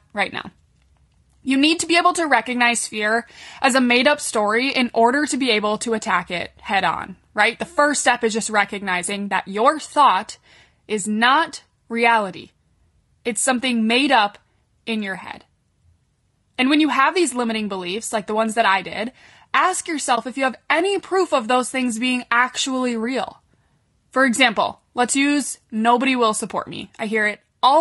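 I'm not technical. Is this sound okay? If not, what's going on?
No, not quite. The whole clip has a rough, grainy edge to the voice, with a fake-sounding top end, likely from low-delay AAC compression, the squeezed format video calls use.

There's also an AAC frame loss with muting around 20.15 to 20.18 s: a tiny chunk went missing, so the sound briefly fades out and back in.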